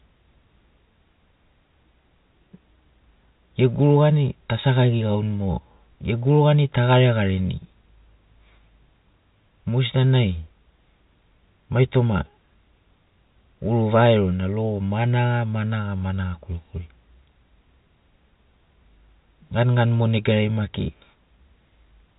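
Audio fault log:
No faults heard.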